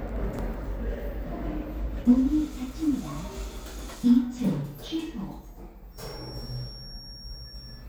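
From 5.89 s to the end, a thin, steady feedback whistle near 5.5 kHz sits roughly 20 dB below the sound, swelling and fading slowly. A loudspeaker-to-microphone loop held just at its feedback point is the likely cause. A spectrogram shows one narrow horizontal line there.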